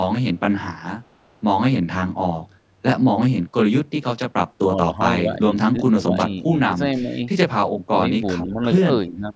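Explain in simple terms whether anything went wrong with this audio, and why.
Channel delay (comb filtering) runs throughout. One channel lags by about 20 ms, so mixing both cancels evenly spaced frequencies and the speech sounds rough or slightly doubled.

An echo leak appears briefly at 1.04 to 1.08 s: a faint copy of speech returns 368 ms late, likely because an echo canceller let loudspeaker sound through.

Speech suppressed in double talk occurs at 4.69 to 4.92 s, 5.22 to 6.51 s, 6.70 to 6.75 s, 6.96 to 7.22 s, 7.87 to 8.81 s and 9.08 s to the end. The voice dips, likely because the echo canceller turned it down while both sides talked.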